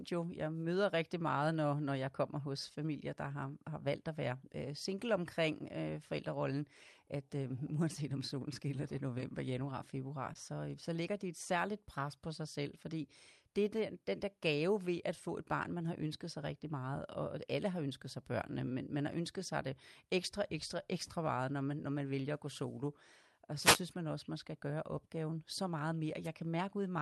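It's a speech clip that came through an Opus call path, with the top end stopping around 12 kHz. Between 10.33 and 10.37 s, right after "januar februar" and before "øh så ligger de", there's short concealed packet loss: about 20 ms never arrived, so the decoder stretched the preceding sound to cover it, leaving a tiny smear. Then there are two wireless microphone noise hits, a burst of static from 23.59 to 23.80 s just before "man også man skal" and a shorter one at 26.23 to 26.28 s after "gøre opgaven så meget". Both are the analogue radio link fading, so receiver noise swells up over the signal.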